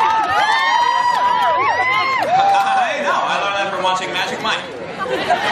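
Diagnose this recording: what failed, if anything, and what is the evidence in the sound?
Nothing failed in this recording.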